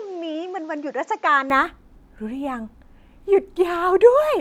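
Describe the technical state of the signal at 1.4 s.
At 1.4 s the signal is still in the input-switched-to-a-poorer-device stretch, which runs from 0.0 to 1.5 s. Nothing sounds above 7.6 kHz, so the speech is duller. It sits roughly 5 dB quieter, over a faint new noise floor. The input was likely switched to a weaker microphone.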